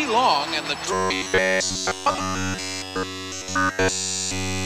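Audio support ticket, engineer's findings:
Robotic sound from repeated short buffers, 0.93 s through to the end. Metallic, rigid buzz at 93.8 Hz riding on the sound; pretty much all of it is repeats, nothing fresh getting through. Likely cause: playback starved of new audio, looping the last chunk, a period near 10.7 ms. The loop rate sets that fixed pitch.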